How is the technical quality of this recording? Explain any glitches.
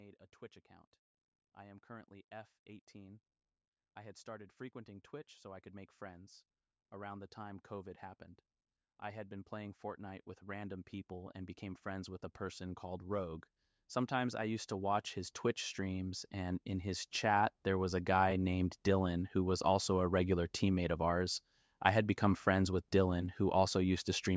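The recording has two automatic gain rising episodes in the call's speech path, which band-limits the audio to nothing above 8 kHz. From 9.0 to 13.35 s, and again from 14.08 to 18.52 s, the automatic gain control judged the input too quiet and ramped its gain up by about 7 dB and then about 8 dB. Speech and background swell together over several seconds.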